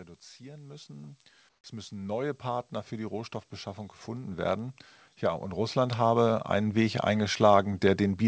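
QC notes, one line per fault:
0.38 to 3.49 s and 4.05 to 6.83 s, automatic gain rising: the level control judged the input too quiet and ramped its gain up slowly, by about 10 dB over the first stretch and about 9 dB over the second, so speech and background swell together rather than the speech alone getting louder.
1.49 to 1.64 s, comfort noise in place of the background: for about 150 ms in a pause, the real room sound gives way to a flat, featureless hiss roughly 7 dB quieter. This is likely the receiver filling a gap in transmission with synthetic noise.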